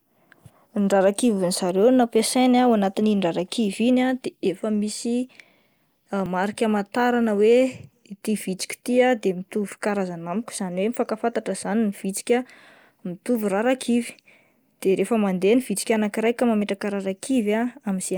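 At 6.26 s and again at 16.62 s, right after "ny vitsika anankiray ka", the speech skips ahead about 20 ms, likely a dropped buffer (overrun) splicing the audio together.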